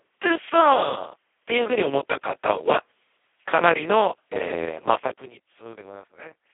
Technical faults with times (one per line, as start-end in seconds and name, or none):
0.00-6.53 Speex codec